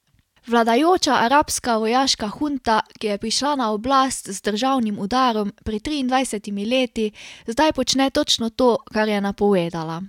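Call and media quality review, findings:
No faults found in the speech recording. Nothing heard warrants a ticket entry.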